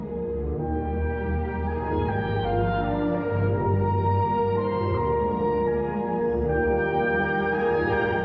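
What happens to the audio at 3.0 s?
Nothing goes wrong at 3.0 s; the audio plays through that moment intact, with no dropout, click or distortion.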